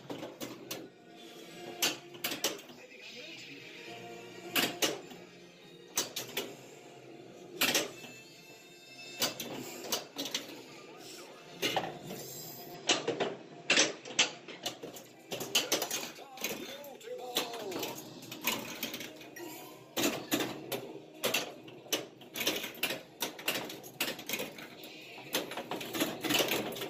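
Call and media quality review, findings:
12.74–14.65 s: sound abruptly turns dull, nothing above 8 kHz, a few dB level shift, new background hiss about 30 dB under the signal, no gap at the switch. Likely input switched to a poorer device; band limit fits a 16 kHz capture path.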